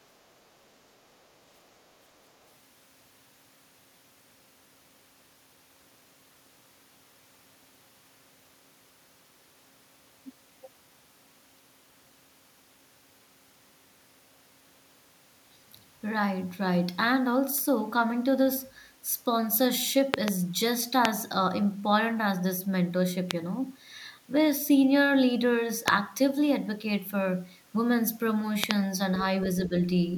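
Loud pops land at 20.14–20.30 s (a double), 21.05–21.07 s, 23.31–23.33 s, 25.88–25.90 s and 28.64–28.73 s (another double). They are sharp thumps standing some 20 to 25 dB above the speech, likely from a voltage spike caused by a plug, switch or static discharge. Unlike a dropout, the speech carries on unbroken beneath each one.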